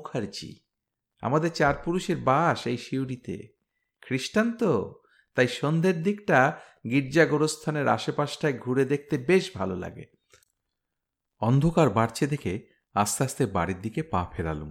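No technical faults can be heard anywhere in the recording.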